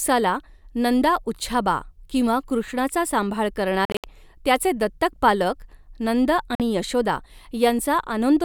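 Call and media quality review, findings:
Bluetooth dropout, 3.85–4.04 s, after "उच्छाबा' किंवा कृष्णाचा सांभाळ": about 140 ms of silence in several short holes, longest about 70 ms. Second dropout, 6.55–6.60 s, after "पालक नंद": one 46 ms gap. Likely late packets discarded at the headset; audio resumes as though it had played through the gaps.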